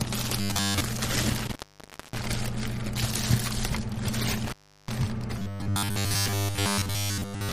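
Audio likely arrived too seldom from 0.41 to 0.81 s. The software kept looping a stretch of about 10 ms in place of all the incoming sound. This is robotic sound from repeated short buffers, heard as a rigid, metallic 100 Hz buzz.

An intermittent contact then opens the line between 1.38 and 2.26 s. The sound cuts out for 0.61 s with crackle at both edges, leaving faint hiss. The same thing happens between 4.47 and 4.93 s, this time for 0.36 s.

From 5.39 s to the end, the repeated-buffer fault returns. Most of the sound is again replaced by the 100 Hz buzz.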